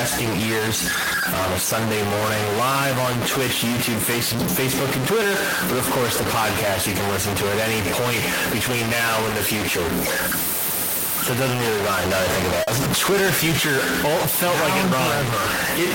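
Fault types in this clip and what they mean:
stuck bit: The whole clip carries a distortion layered on the speech, and the pauses between phrases are not silent but filled with a steady noise floor. That pattern is likely from one sample bit held permanently at a fixed value, so roughly half the samples are pushed off by that bit's weight, and near-zero signal flips sign-dependently into audible hiss.
short concealed packet loss: At 12.63 s, right after "now that I think", about 40 ms of audio failed to arrive and was synthesised by the receiver, which extended the preceding sound and then crossfaded back into the real signal around 12.70 s. It shows as a brief smear or wobble in the speech at that point, where a short consonant may be blurred or missing.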